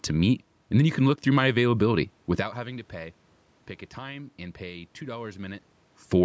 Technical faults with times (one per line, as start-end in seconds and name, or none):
none